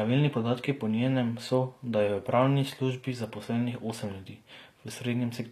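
Right from the start and all the way through, the speech carries plainly audible coding damage, with nothing at all above about 14.9 kHz. The treble is bright but not quite real: s sounds come out gritty and lispy, with a metallic sheen where the upper harmonics don't line up with the body of the sound. That's likely HE-AAC compression, the top band rebuilt by copying lower bands upward, at a rate that fits around 24 kbps.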